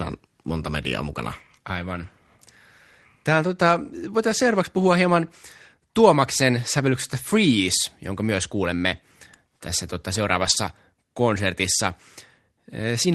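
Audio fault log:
10.41–10.51 s, lost packet rebuilt from error correction: just after "myös kuulemme tässä tota", roughly 60 ms turns rougher and noisier but never drops out, fitting three lost packets patched from low-bitrate Opus copies.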